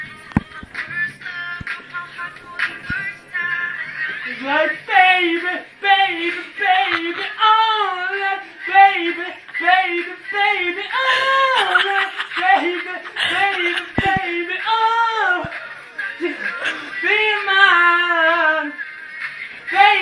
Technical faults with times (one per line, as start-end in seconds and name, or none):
none